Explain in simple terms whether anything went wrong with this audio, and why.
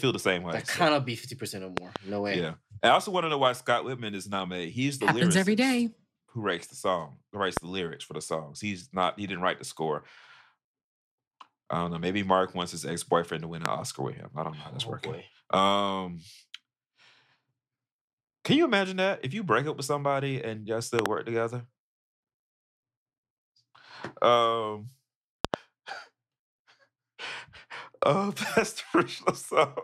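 Loud pops occur at 1.77–1.98 s (a double pop), 7.57–7.59 s, 13.66–13.68 s, 20.99–21.08 s (double) and 25.45–25.56 s (double). These sharp thumps sit well above the speech, which continues underneath. They are likely caused by brief electrical jolts in the recording chain.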